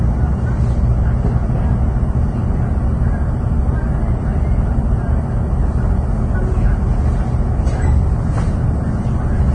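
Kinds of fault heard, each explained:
Vorbis compression: Nothing comes through above about 9.7 kHz. The remaining treble sounds hissy and grainy, tones are roughened and attacks smeared throughout. This heavy damage is likely from low-quality Vorbis coding, fitting a bitrate near 25 kbps, where fine detail becomes noise.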